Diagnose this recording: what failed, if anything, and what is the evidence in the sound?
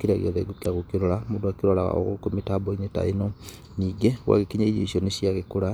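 The fault is at the codec stage: damaged data in a compressed stream. There's a short disturbance from 0.62 to 0.66 s, about 40 ms, where corrupted bytes made the decoder misread frames, lose sync, and hunt for the next valid frame header before recovering.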